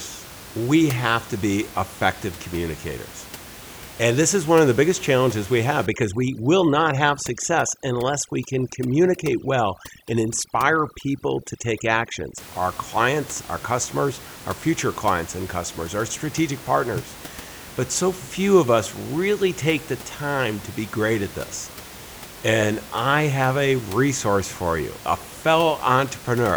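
From 5.86 to 12.38 s, overdone noise removal sets in: the noise reducer is set too strong and shuts down frequency bands near its noise estimate, taking quiet speech detail with them. The room noise, about 18 dB below the speech, drops and breaks up into twinkling specks.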